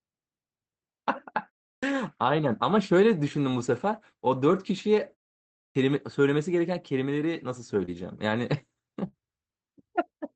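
At 1.77 s the speech comes in abruptly out of a 0.34 s pause, its opening sounds missing. At 5.70 s the same happens after a 0.62 s pause. This is a clipped start after a pause: the output device dozed in the silence and took about 55 ms to wake, swallowing the first 56 ms and then 53 ms of each phrase.

Between 7.85 and 7.89 s a brief smear passes through the speech, a wobble where 20 ms of sound never arrived. This short concealed packet loss was covered by the receiver extending the preceding sound for about 21 ms and then blending back into the real signal.

Over the last 20 ms of that same spot, 7.87 to 7.89 s, the sound turns rougher and noisier. This is a lost packet rebuilt from error correction, which points to a single lost frame. The decoder played the low-bitrate Opus copy carried by the next packet instead of leaving a gap. The call path's 8 kHz bandwidth limit stays the same throughout.

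At 9.07 to 9.15 s the last sound is held as a brief fading buzz or hiss, and the speech resumes a little further on. This is a burst of packet loss: 60 ms went missing, roughly 54 ms of it was filled by stretching and fading the previous sound, and what fell in that gap is gone.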